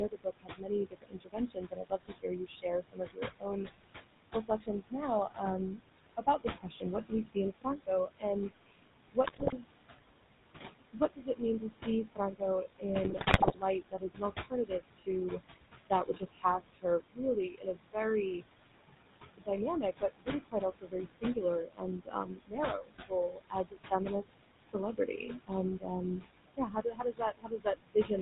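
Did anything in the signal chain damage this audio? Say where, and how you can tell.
Yes. The call-processing stage runs a noise suppressor throughout, and you can hear noise suppressor artifacts. The room noise sits only about 9 dB below the speech, so the suppressor works hard, pulling the background down by about 20 dB. Between phrases it sinks, then swells back under the speech. This is frame-by-frame band gating reacting to a noisy room.

The codec stage is GSM full-rate, and its damage is plainly audible across the whole clip. Nothing comes through above 4 kHz. The voice has the buzzy, gravelly roughness of a coder that models the vocal tract and excites it with sparse regular pulses. The sound fits the 13 kbit/s full-rate coder rather than a later GSM variant. It colours every phrase.

The same suppressor also causes speech cut by the noise suppressor. It mistakes parts of the speech for noise in four stretches: 0.09 to 9.91 s, 10.92 to 18.43 s, 19.37 to 25.89 s and 26.57 to 28.1 s. 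Soft consonants and word endings are pulled down by up to about 22 dB, so they sound swallowed. About four seconds are affected in the first stretch, about two in each of the next two, and under a second in the last.

The network link adds GSM bit errors in two bursts, 9.24 to 9.53 s and 13.04 to 13.57 s. The voice breaks into squawks, pops and gargling there. The second burst is longer and hits more frames. Flipped bits reach the decoder and corrupt its filter, pitch and gain values, bending the spectrum or spiking the level frame after frame while each burst lasts. The error density points to a weak radio link.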